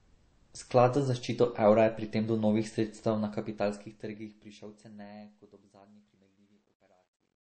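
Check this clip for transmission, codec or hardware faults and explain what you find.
Two faults are audible in this speech clip. One runs through the whole recording. The other affects the fade at the end.

Transcoding between lossy codecs is present throughout. Nothing is heard above 8.3 kHz. The top end is dull. Coarse, low-rate coding artefacts sit under a second layer of codec texture. The likely cause is a chain of encoders. The low cut-off fits an early MP3 pass at a very low rate, around 32 kbit/s. A later WMA encode near 96 kbit/s then spent its bits reproducing that damage and added its own.

Truncation distortion on a fade runs from 3.04 s to 7.6 s. The fade-out starts at about 3 s. The trouble is in resolution. The fade stage kept too few bits and added no dither, which fits roughly 11-bit output. As the level drops, the waveform collapses into a few coarse steps. From 4.94 s to 7.6 s the tail sounds gritty.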